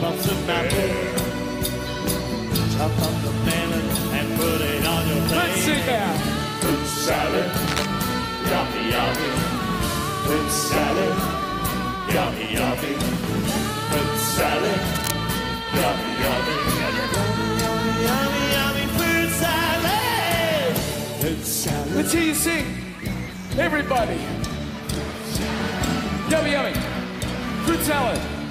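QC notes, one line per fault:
7.67 to 7.86 s, cable scratch noise: a brief burst of dense, ragged crackle rides over the sound for under a fifth of a second, nearly as loud as the programme itself. This is likely a worn cable or connector being moved, its contact resistance jumping erratically.
14.95 to 15.17 s, cable scratch noise: the same harsh rustling returns at a similar level for about 0.2 s, likely from a worn cable or connector contact being disturbed.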